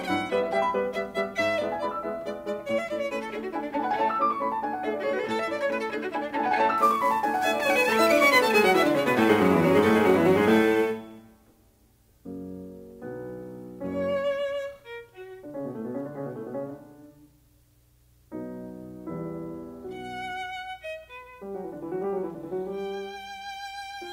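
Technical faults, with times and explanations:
6.78–11.21 s, sample clock jitter: the converter's clock wavers by roughly 10 microseconds, so samples land off time and the error grows with waveform slope. The music gains a hiss and roughness about 25 dB down, swelling on loud, bright passages and fading when quiet.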